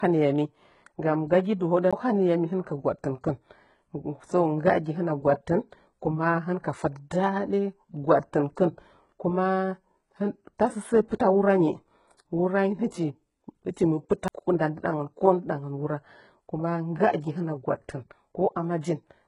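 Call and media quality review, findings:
Speech, whole clip: treble gritty and lispy, s sounds smeared, upper band not tracking the lower harmonics, nothing above 11 kHz. Likely HE-AAC compression (v2) with heavy damage, consistent with a bitrate near 12 kbps. Spectral band replication copies lower bands upward under a coarse envelope, so the treble is synthetic rather than the original.

1.91 s and 14.28 s: tick with a very short mute, roughly 15 ms and under 10 ms, then playback resumes from another point. CD skip: read laser jumped tracks on the spiral, player muted briefly and continued at an offset of whole disc turns.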